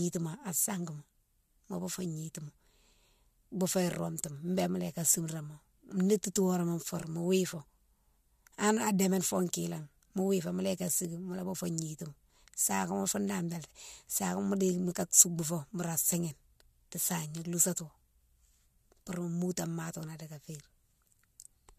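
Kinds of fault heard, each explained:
No kinds of fault are heard in this speech recording.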